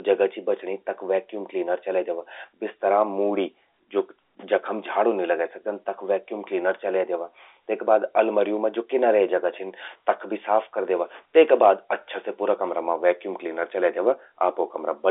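Nothing stood out on listening to this telephone-band speech, which carries the narrow 300 Hz to 3.6 kHz sound of G.711 A-law coding.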